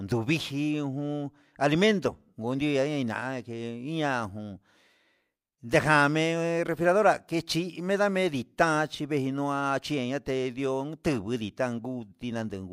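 No technical faults are audible.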